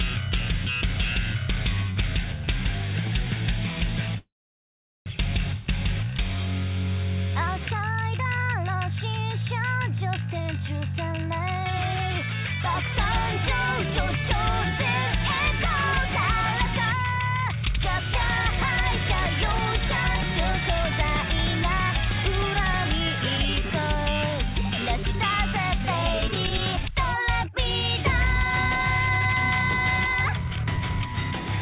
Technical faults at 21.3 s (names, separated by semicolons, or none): jitter buffer speed-up